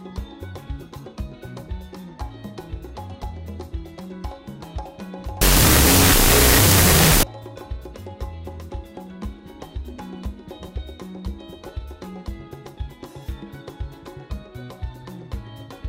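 From 5.41 to 7.23 s the audio collapses into loud, harsh noise with the original sound faintly buried inside it, slowed to half speed and dropped about an octave. This is a wrong sample width fault: 16-bit integer samples are being read as unsigned 8-bit, so each sample splits into two mismatched byte values. Only the high bytes carry the real signal. A byte-order error would give similar noise at the correct speed and pitch.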